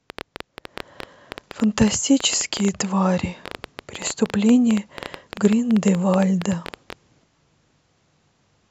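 From 0.1 s to 6.94 s a train of clicks sits over the speech. It runs at about 9.4 clicks per second with uneven spacing, roughly seventy in all. Each click peaks around 10 dB above the voice, so the ticking stays audible in the pauses as well. Likely cause: interference or a faulty connection or power supply. A spectrogram shows thin vertical broadband lines, and the waveform shows sharp, similar spikes.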